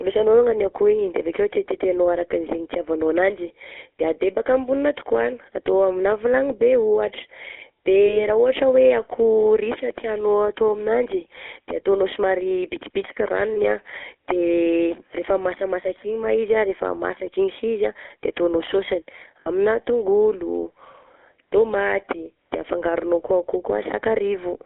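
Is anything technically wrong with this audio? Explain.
Yes. The speech carries two faults, one running through the whole clip and one appearing at three moments.

GSM full-rate codec, throughout: the speech has been through the original GSM coder, consistent with its 13 kbps full-rate mode. The coder rebuilds the voice from a vocal-tract filter excited by sparse, evenly spaced pulses, discarding most of the excitation detail. The result is a plainly audible buzzy, gravelly roughness, heard within a narrow 300 Hz to 3.4 kHz band that leaves the voice thin and muffled.

Lost GSM frames, at 8.06 to 8.24 s, at 13.54 to 13.60 s just after "ataonao somary bitsibitsika", and at 19.40 to 19.48 s just after "ataonao sôsiny": when a frame fails, the decoder reuses the last good frame's settings. Each gap is held as a brief, rough, metallic ring instead of fresh speech. The first two sound like a single 20 ms frame each. 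The third is longer, which fits about three frames, roughly 60 ms.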